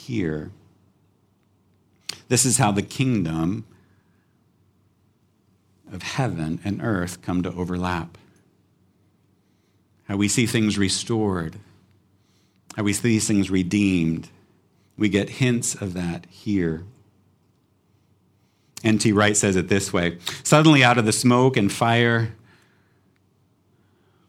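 No technical faults are audible.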